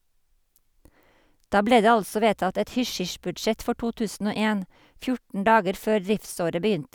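Mains hum enters at 2.12 s, right after "ble det", and lasts until 4.03 s. It is a steady 60 Hz tone sitting about 35 dB below the speech. A ground loop or nearby transformer has leaked power-line current into the signal path.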